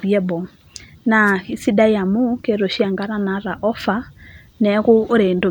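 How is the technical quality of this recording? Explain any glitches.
The recording has one glitch: a wireless microphone noise hit from 1.25 to 1.32 s. The FM radio link fades briefly as reflected signals cancel, so receiver noise rises and breaks through. It is heard as a short burst of static, about 70 ms long, over the speech.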